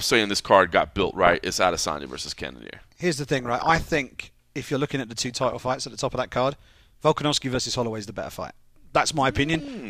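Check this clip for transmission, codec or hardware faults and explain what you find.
Two faults affect this speech: DAB burbling at five points and one repeated buffer.

DAB burbling occurs at 1.00–1.35 s, 3.37–4.04 s, 5.23–5.84 s, 7.32–7.77 s and 9.50–9.68 s. Weak reception let bit errors, from a fraction of a percent up to about 1 percent, corrupt MP2 sub-band data. This produces bubbling, chirping squelches or a few watery blips over the speech.

A repeated buffer occurs at 2.28 s. Audio arrived late, so the last tiny block, consistent with a 64-sample buffer, was played three times. The result is a brief click-like buzz.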